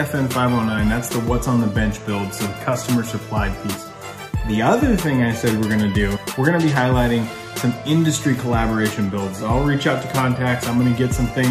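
Nothing goes wrong anywhere along the way here, so there's no fault to point to.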